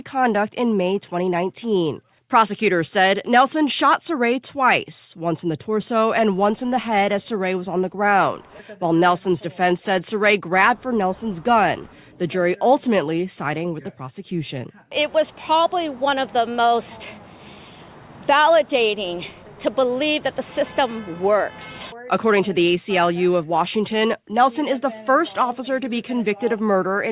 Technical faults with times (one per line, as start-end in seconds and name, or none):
none